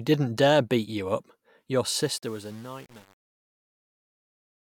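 Truncation distortion on a fade runs from 1.86 s to the end at 4.65 s, where the speech fades out from 1.86 s onward. The gain stage discards low-order bits without dither. The coarseness points to about 7-bit resolution. As the level drops, the waveform collapses into a few square steps, so the tail of the speech turns gritty and buzzy rather than thinning out cleanly.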